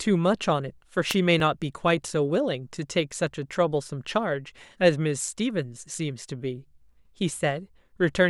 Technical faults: wireless microphone noise hit; dropped buffer (overrun)

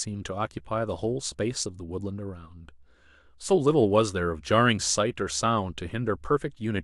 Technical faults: none

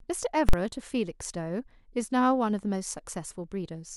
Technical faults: invalid numbers at full scale

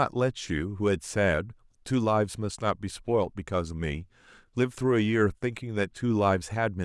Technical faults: none

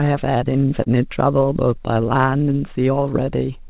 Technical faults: clock drift between sender and receiver; repeated timing corrections; short stall from a late packet

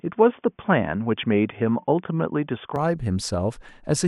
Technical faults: input switched to a poorer device

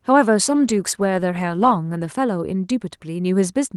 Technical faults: call bitrate drop

